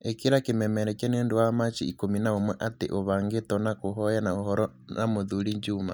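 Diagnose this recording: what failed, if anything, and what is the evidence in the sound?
Nothing failed, and there is no evidence of a fault anywhere in the sound.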